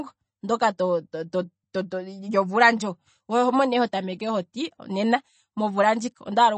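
MP3 compression throughout this speech: nothing above 8.4 kHz and plainly audible watery swirl, likely from an encoder starved of bits, fitting a low bitrate near 32 kbps.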